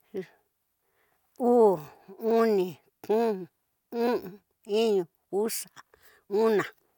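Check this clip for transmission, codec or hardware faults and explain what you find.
No transmission, codec or hardware faults turn up anywhere in this speech recording.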